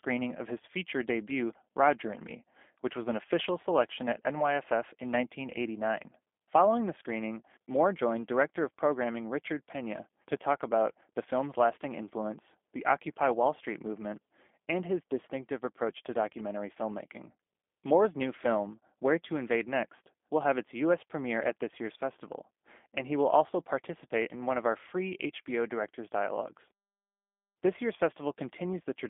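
From the first second to the end, the speech carries the sound of the G.729 codec, and the damage is plainly audible. The band sits roughly between 250 Hz and 3.5 kHz, with nothing at all above 3.7 kHz, so everything sounds boxed-in and telephone-thin. The slightly rough, synthetic texture comes from rebuilding each 10 ms frame out of a vocal tract filter, a pitch predictor and a few pulses, which fits an 8 kbit/s G.729A link.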